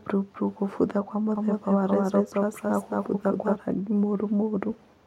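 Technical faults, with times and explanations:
1.36–3.56 s, doubled audio track: just after "bururu kũbutha kwa", a slower second path likely captures the speech again. A full-band copy at roughly equal level trails by around 200 ms, giving a dry echo without decay that switches on and off abruptly.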